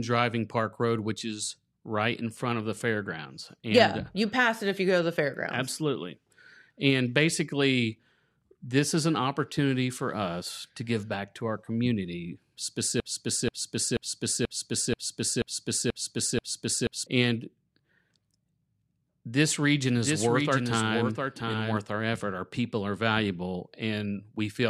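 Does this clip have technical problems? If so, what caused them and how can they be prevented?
Yes. From 13.0 to 17.1 s a broken-record loop repeats one 0.48 s fragment eight times back to back. The likely cause is a stalled player or stream resending its last buffer. Speech from that stretch is lost. Buffer monitoring with a stall timeout prevents it.

From 19.95 to 21.77 s a doubled audio track appears. A full-band copy about 5 dB quieter trails by roughly 0.7 s. It has no room decay and starts and stops abruptly, likely from a second, slower capture path. Routing each source once prevents it.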